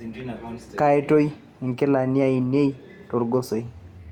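Nothing in the speech recording points to a technical fault.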